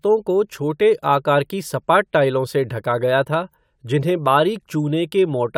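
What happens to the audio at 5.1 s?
Nothing goes wrong at 5.1 s; the speech carries on intact through that moment, with no dropout, click or distortion.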